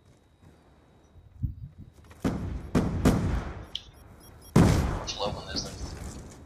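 No technical faults can be heard anywhere in the clip. Nothing in the audio calls for comment.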